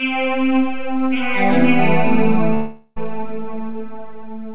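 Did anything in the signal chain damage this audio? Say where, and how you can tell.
Yes, at the network stage. From 2.54 to 2.98 s the sound turns into a fading buzz, then about 30 ms of silence, and resumes with that stretch lost. This is likely a long network dropout. The waveform tapers nearly flat, and the spectrogram shows a smeared, decaying band.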